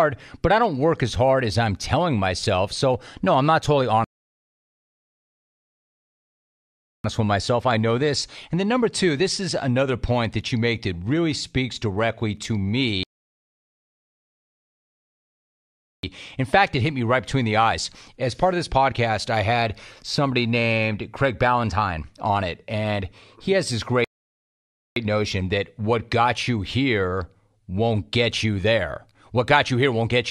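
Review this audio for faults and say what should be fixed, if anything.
The speech halts for rebuffering stalls at 4.04–7.04 s, 13.03–16.03 s and 24.04–24.96 s. The player runs dry and then resumes exactly where it stopped, showing as flat-line silence and blank spectrogram columns. Prevent this with a larger playback buffer or adaptive bitrate.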